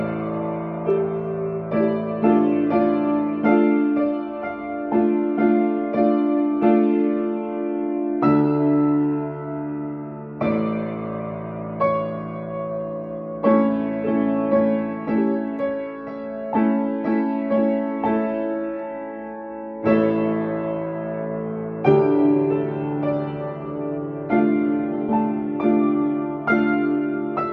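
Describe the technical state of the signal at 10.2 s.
Around 10.2 s the signal is intact, with no audible technical fault at that point.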